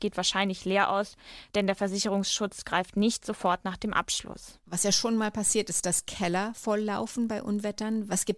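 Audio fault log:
throughout: resampler restarted on every block. There's a steady 50 Hz buzz riding under the speech, and it drops away in the gaps. The 48 kHz to 24 kHz conversion looks like it was run on each 20 ms block in isolation, so the filter never saw the real neighbouring samples at the block edges. Each seam picks up a small error, and at 50 seams a second those ticks fuse into a rough buzz rather than separate clicks.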